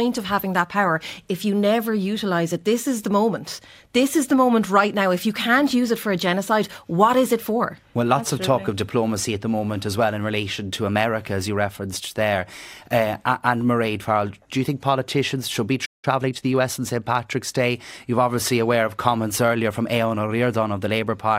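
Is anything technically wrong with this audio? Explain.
Yes, there are two related faults. From 15.85 to 16.05 s the speech cuts off mid-flow and goes silent for about 0.18 s before resuming. This playback stall most likely came from the player's buffer running empty or its output thread being blocked, so nothing reached the output until it recovered. Right after, from 16.05 to 16.75 s, the speech sounds hurried, running about 1.25 times normal speed at unchanged pitch. This is time-compressed catch-up: the player trims its backlog by cutting out small slices and cross-fading across the joins.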